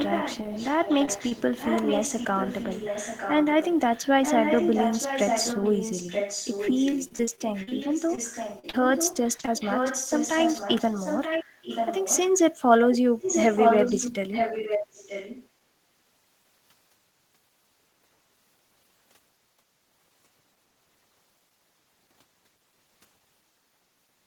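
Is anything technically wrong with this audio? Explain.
Yes, the clip has three kinds of fault.

Echo leak, from 0.0 to 12.32 s and from 12.91 to 15.49 s. The far side likely played the call on a loudspeaker and its echo canceller failed to remove it, so the signal returned. A copy of the speech trails 930 ms behind, only a little quieter than the original.

Short concealed packet loss at 1.05–1.09, 1.29–1.33, 8.15–8.19, 8.59–8.65 and 8.69–8.75 s. Audio between 20 and 40 ms long arrived too late to decode, and the receiver extended the preceding sound to cover each hole. Each one is heard as a brief smear or wobble.

Repeated packet loss (robotic sound) from 6.65 to 7.73 s and from 9.13 to 9.49 s. Packets kept dropping in close succession, with holes of up to 37 ms, and concealment filled about a fifth of each span. The speech turns choppy, with pieces missing.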